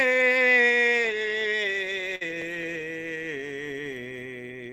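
A short stall from a late packet interrupts this music clip at 2.15 to 2.23 s: the jitter buffer ran dry, so the last sound was held for about 54 ms until the packet arrived, losing nothing but playing 54 ms later thereafter. Short concealed packet loss follows at 2.27 to 2.31 s, where 20 ms of audio never arrived and was replaced by an extension of the preceding sound, heard as a brief smear.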